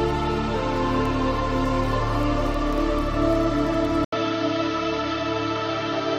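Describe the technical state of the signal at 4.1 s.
At 4.1 s you're right at the point where the input switched to a poorer device. From about 4.05 s to the end, everything above roughly 6.6 kHz is gone, so the sound turns duller and boxier. It's preceded by a gap of about 80 ms right at the changeover. The level stays about the same, but a different, faint background noise floor comes in. That's likely the system hopping to another microphone or a narrower-band headset path.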